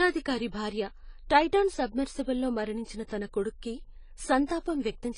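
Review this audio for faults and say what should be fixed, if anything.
The speech sounds dull and smeared throughout, with nothing above 10 kHz and a warbly, fizzy edge on sibilants. That's likely AAC compression, with the encoder lowering the cut-off and starving bands at what fits a low bitrate around 24 kbps. To prevent it, encode at a higher bitrate or keep an uncompressed master for anything you'll reprocess.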